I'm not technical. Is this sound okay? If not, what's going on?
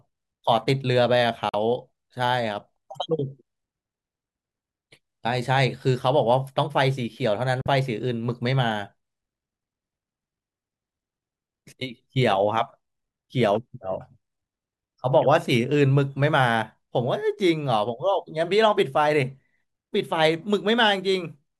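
No. Two Bluetooth dropouts occur, at 1.49–1.55 s and 7.61–7.67 s. The speech abruptly cuts to silence for a split second, then carries on slightly further ahead. This likely happens when the wireless link briefly fails to deliver sound to the headphones in time.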